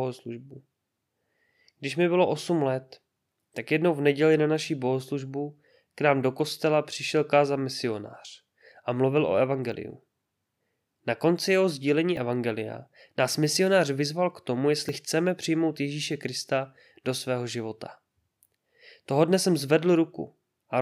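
Dropped buffer (overrun) at 9.72, 12.17 and 14.89 s: each is a jump where the speech skips ahead by roughly 10 ms with no gap. The likely cause is samples being overwritten before the recording program collected them, so the surrounding audio joins directly.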